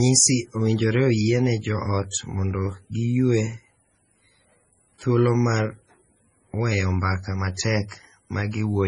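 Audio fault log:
throughout: low-bitrate audio saved at a high bitrate. The speech stops dead above 10.5 kHz and has the smeared, swirly texture of heavy MP3 coding, likely from a very low-bitrate encode later re-saved at a high bitrate. Unlike a plain low-bitrate file, its size promises quality that the sound lacks.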